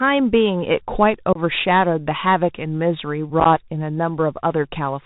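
Throughout, the speech carries Bluetooth CVSD headset codec damage, fitting a 64 kbit/s link: nothing above 4 kHz, scratchy sibilants, granular hiss, and distortion where loud highs outrun the adaptive step. Unconcealed Bluetooth headset packet loss punches abrupt holes: 1.33 to 1.39 s, several packets; 3.40 to 3.46 s, scattered, chopped gaps up to about 11 ms; and one packet at 4.75 s, a brief hole.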